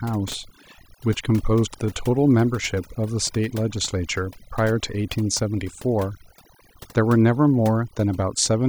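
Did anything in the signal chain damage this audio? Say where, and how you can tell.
Yes. Overdone noise removal at the call-processing stage throughout: gaps hold near silence with twinkling specks as bands near the noise floor are switched off.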